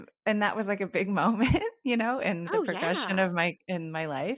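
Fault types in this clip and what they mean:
No fault types are present in this clip.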